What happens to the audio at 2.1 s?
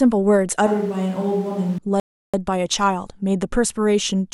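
A rebuffering stall runs from 2.00 to 2.34 s: the player ran out of audio, so the speech drops to silence for about 0.34 s, then resumes exactly where it stopped.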